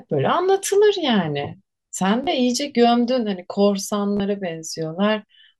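A brief buzzy stutter breaks the speech at 2.24 to 2.27 s, and the same quick machine-gun repeat returns at 4.17 to 4.20 s. Both are Bluetooth stutter. Each time, the link dropped about 29 ms of audio, which fits roughly two lost packets. The receiver kept replaying its last short buffer until fresh data arrived. The speech then picks up further along, as though it had kept playing through the gap.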